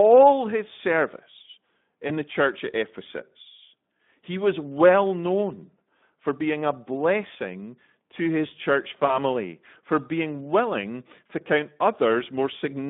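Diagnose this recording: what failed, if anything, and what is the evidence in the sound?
The codec stage is at fault: the speech was carried through Speex at a low setting, which fits a bitrate around 11 kbps. With so few bits for the excitation, the Speex codec damage is plainly audible for the whole clip. The speech has a hoarse, noisy grain. The line band runs from about 150 Hz to 3.6 kHz, so nothing above that carries real detail.

The second fault is in the network stage. Packets went missing, and the decoder covered the gaps by repeating its last pitch and filter at falling gain. This is VoIP packet loss concealed by the speech codec. At 2.07 to 2.12 s, between "his service" and "the church at", a brief smear replaces the sound, consistent with one lost 20 ms frame. A similar blip occurs at 3.97 to 3.99 s. After "blessing to his church", 9.05 to 9.19 s fades into a longer, weakened stretch that fits two lost frames. 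Because each frame builds on the last, that stretch stays distorted after packets resume.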